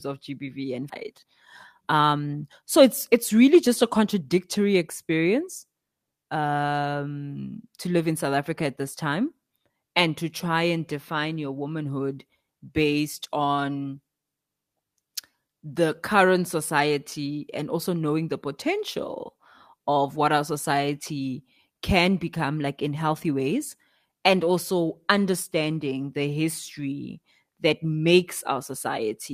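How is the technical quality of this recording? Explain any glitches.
Two timing glitches affect the recording, both early in the speech.

Skip ahead, at about 0.89 to 0.91 s: a stretch of audio, roughly 0.7 s long, never reached playback. It was lost in transit or discarded when the jitter buffer overflowed while newer audio was already queued. Nothing fills the hole, so the speech on either side is spliced almost directly together. You hear an abrupt forward jump, with a chunk of the utterance missing and the delay shortened by the same amount.

Jitter buffer speed-up, from 1.81 to 4.22 s: the buffer was holding more audio than its target. To bring the delay back down, the receiver repeatedly cut out tiny slices, each one or a few pitch periods long, removing around a third of a second in total. Because whole pitch cycles are dropped, the pitch stays the same while the speech plays at about 113% of normal speed, sounding noticeably hurried for those 2.4 seconds.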